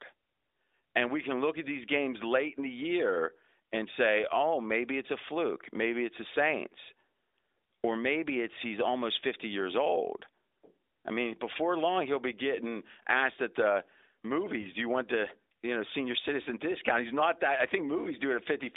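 This is a speech clip carried over AMR-NB narrowband mobile coding at 12.2 kbps, with a band of about 250 Hz to 3.7 kHz. At 14.62 to 14.67 s, just before "do you want the", a lost AMR speech frame causes a brief dip or warble. The sound points to a single 20 ms frame failing its checksum. The decoder filled the gap by repeating the last good pitch and vocal tract settings at reduced gain.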